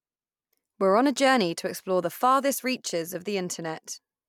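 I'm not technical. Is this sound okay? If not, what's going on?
Yes, nothing in this speech recording points to a technical fault.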